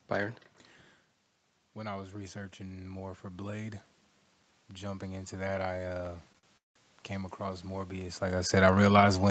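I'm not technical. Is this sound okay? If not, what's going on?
No. From 1.75 to 3.89 s the voice and the background noise slowly swell louder together. That is automatic gain rising: the volume control turned itself up after the sound coming in got quieter.

From 6.05 to 6.77 s the audio drags and stutters four times, with the longest hold lasting about a fifth of a second. These repeated stalls (stutter) happened because the data arrived late, so the receiver stretched out the last sound while it waited. Nothing is lost.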